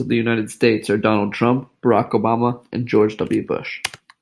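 No technical faults can be heard anywhere in this speech recording. There are no events to place in time, so there is nothing here to date or measure.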